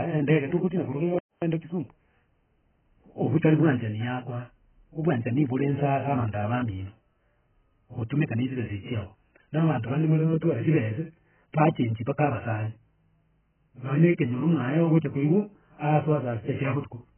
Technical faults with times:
0.00-17.18 AAC compression

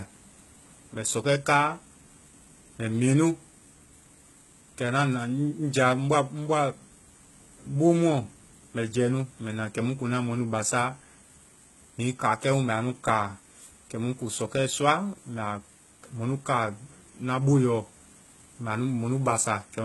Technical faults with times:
0.00-19.85 HE-AAC compression

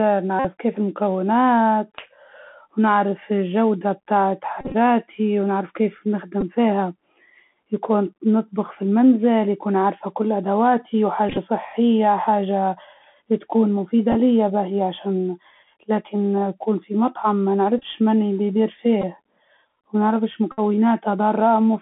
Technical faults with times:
0.00-21.82 Bluetooth CVSD headset codec
0.39-0.46 Bluetooth headset packet repeated
4.61-4.75 Bluetooth headset packet repeated
6.41 Bluetooth headset packet repeated
11.29-11.38 Bluetooth headset packet repeated
14.12-14.15 Bluetooth headset packet repeated
17.78-17.85 Bluetooth headset packet repeated
19.02-19.04 Bluetooth headset packet repeated
20.52-20.60 Bluetooth headset packet repeated

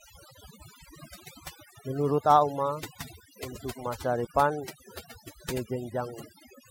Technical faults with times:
0.00-6.70 overdone noise removal

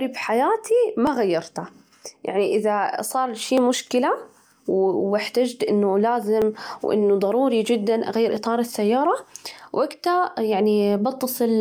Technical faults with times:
1.07 dropped samples
3.58 dropped samples
6.42 dropped samples
8.37 dropped samples

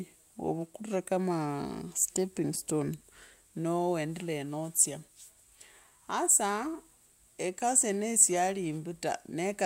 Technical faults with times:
none

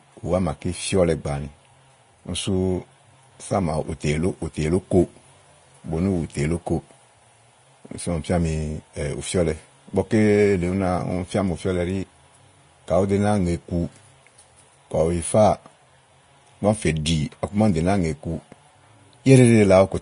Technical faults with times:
0.00-20.02 Vorbis compression

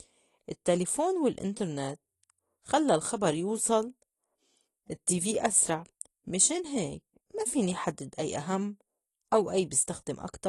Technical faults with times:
0.00-10.48 AAC compression

